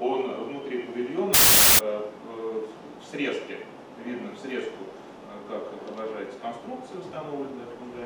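From 1.34 to 1.79 s, the samples are built from the wrong bytes. The reader misassembles each sample's bytes, so the jittery low bits end up dominating the value. You get a burst of loud, harsh broadband noise.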